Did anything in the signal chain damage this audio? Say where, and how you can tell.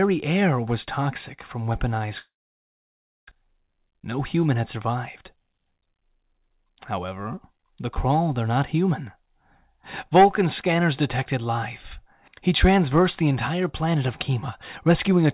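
Yes. Long network dropout, 2.18 to 3.33 s, at the network stage. The last sound is stretched into a fading buzz, then about 0.98 s of near silence follows, and the speech resumes with roughly a second of content missing rather than delayed. The likely cause is that packets stopped arriving. The receiver's concealment extended what it last had until it gave up, and the stream rejoined further on, shifting the timing by about a tenth of a second.

Jitter buffer speed-up, 5.35 to 7.0 s, in the receive buffer. The speech runs at about 105% of normal speed with its pitch unchanged, so it sounds slightly hurried. The buffer was holding more audio than it aims for. The receiver repeatedly cut out short pieces of one or a few pitch periods, removing about a tenth of a second in total to bring the delay back down. All of this sits on a G.711 mu-law call path with nothing above 4 kHz.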